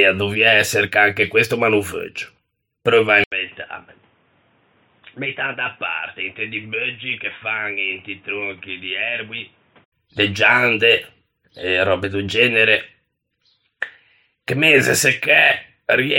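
Speech, with the input switched to a poorer device from 3.24 to 9.92 s, likely a headset or secondary microphone. After "preuvo à", a gap of about 80 ms gives way to boxy sound cut off above 3.8 kHz, about 10 dB quieter, with new noise about 30 dB down.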